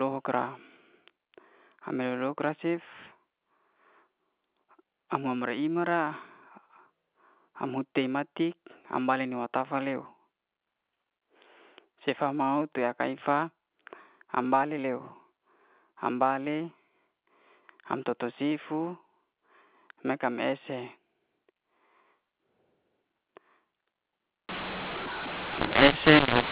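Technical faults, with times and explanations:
24.49–26.51 s: mu-law and A-law mixed up. The speech, carried as G.711 mu-law telephone audio, is decoded as A-law here, so sample levels are scrambled. Some come out too loud, others too soft, and the quietest samples are lifted well above silence, giving harsh distortion through to the end.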